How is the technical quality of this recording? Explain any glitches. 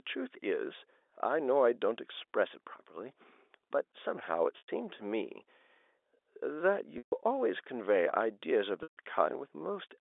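The recording has three short glitches caused by packet loss with pitch repetition, heard over the narrow telephone band of G.711 coding.

At 4.58 to 4.68 s (100 ms), 6.98 to 7.12 s and 8.83 to 8.97 s (140 ms each), the receiver repeated the last pitch period to cover missing data, which fits 10 ms packets. The sound holds as a brief buzzy tone, fades, then cross-fades back. A waveform shows identical repeating cycles under a decaying envelope. A spectrogram shows flat, thinning harmonic lines.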